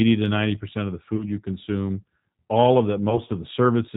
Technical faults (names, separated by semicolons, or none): G.729 codec; VoIP packet loss concealed by the speech codec